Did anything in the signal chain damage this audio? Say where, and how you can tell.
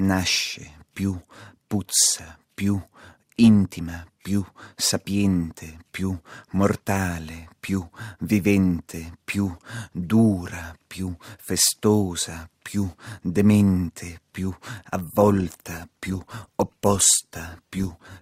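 Yes, at the network stage: an adaptive stream at a lower bitrate from 15.21 s to the end. The quality changes suddenly, with more codec artefacts, which fits a step down from about 64 to 16 kbit/s Opus. Unlike packet loss, nothing goes silent.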